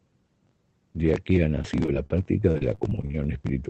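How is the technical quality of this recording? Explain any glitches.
The recording has one clear glitch: a run of repeated packet loss that gives the speech a robotic quality. The audio carries call-codec character, with the top end stopping at 8 kHz, which fits Opus at around 24 kbps.

From 1.62 to 3.14 s, just after "aquí ha", fifteen short dropouts (the longest 38 ms) are each patched by stretching the preceding sound. About a fifth of that span is synthetic fill, so speech turns choppy, with fragments missing.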